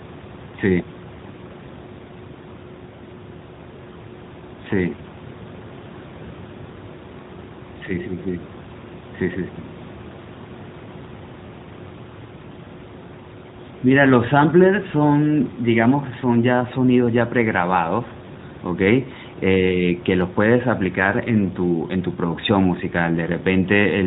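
Nothing stood out on listening to this speech recording.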